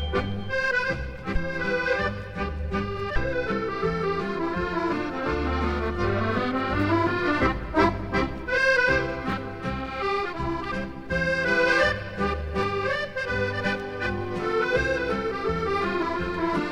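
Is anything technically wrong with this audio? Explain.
Yes, there are chunks out of order at 6.81 to 6.83 s and 9.30 to 9.33 s. A 10 ms chunk played one slot late, then one two slots late, so nothing is lost but the order is scrambled. Each brief jumbled moment has three hard joins.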